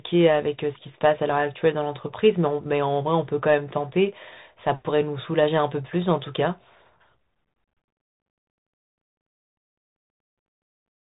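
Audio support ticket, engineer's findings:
Bluetooth CVSD headset codec throughout: speech band-limited, nothing above 3.8 kHz; scratchy sibilants, granular hiss, slope-overload distortion on loud highs from one-bit delta coding, consistent with 64 kbps.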